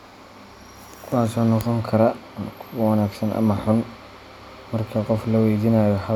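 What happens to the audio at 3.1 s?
Nothing goes wrong at 3.1 s; the speech runs through that moment intact, with no dropout, click or distortion.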